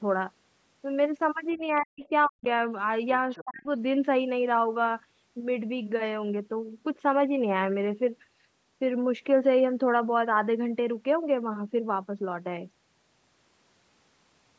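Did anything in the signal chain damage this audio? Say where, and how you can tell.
Yes, in the call processing. Short scraps of the other side's voice leak through at 1.51–1.58 s, 2.04–2.08 s and 3.3–3.42 s, faint, roughly 20 to 30 dB under the talker. This is likely residual loudspeaker echo that the echo canceller left in the microphone signal.

The talker's speech is suppressed in double talk. It dips sharply, by about 35 to 40 dB at its deepest, from 1.54 to 2.45 s and again from 3.41 to 3.67 s, overlapping the leaked voice. The echo canceller likely couldn't separate the two voices and turned both down together.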